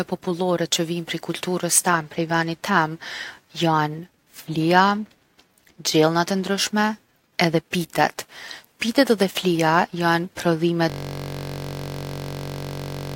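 A system hang loop starts at 10.90 s and lasts to the end. The system froze while the audio hardware kept replaying one 21.33 ms slice of speech, which fits a 1024-sample buffer. Repeated over and over, it becomes a steady 46.9 Hz buzz.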